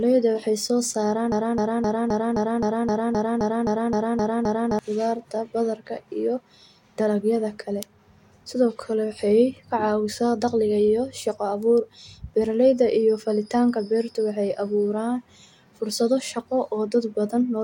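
At 1.32 s the playback or stream most likely stalled and kept resending the last fragment it held, producing a broken-record loop in the speech. A slice about 0.26 s long repeats back to back 13 times, identical each pass, until 4.79 s, giving a rapid mechanical stutter at roughly four repeats per second. The material that should have filled those three and a half seconds never plays.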